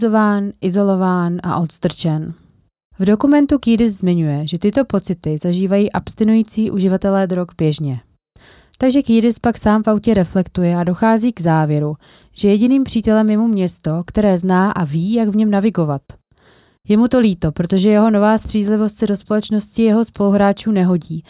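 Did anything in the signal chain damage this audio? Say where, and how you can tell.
No, nothing along the chain has audibly damaged this speech recording; the signal holds steady throughout with no stage leaving a mark on it.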